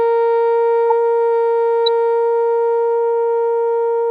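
Corrupt frame decoded at 0.90 s and 1.86 s: a couple of bit-damaged frames were played anyway, throwing energy to wrong frequencies as a chirp, squeak, blip or burst of noise, the second louder.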